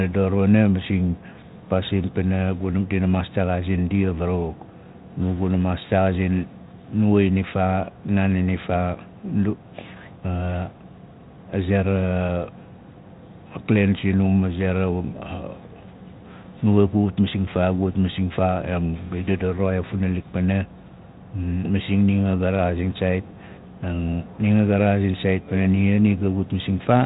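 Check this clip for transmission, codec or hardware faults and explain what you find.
Nothing stood out on listening to this speech.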